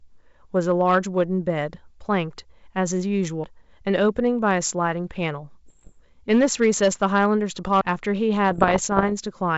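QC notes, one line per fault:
3.44 s and 7.81 s, CD skip. Each is a brief tick with a dropout of only a few milliseconds, the first slightly shorter than the second. The pickup lost its track and landed on a neighbouring turn of the disc's spiral. The player muted for that instant and resumed from the new spot. So the sound does not carry straight on. It jumps to a point one or more disc turns away, forward or back.
5.67 to 5.94 s and 8.51 to 9.12 s, bit errors on an ADPCM link. Both spans have pops and rough, gritty bursts with quick jumps in level. The second span is longer but a little sparser. The rate is around one percent of bits flipped in the first and around 0.7 percent in the second. The link is wideband, which fits 64 kbit/s G.722. ADPCM codes each sample as a step from a prediction. A flipped bit corrupts the sample and also throws off the decoder's step size and predictor. The damage rings on for some milliseconds until the decoder settles.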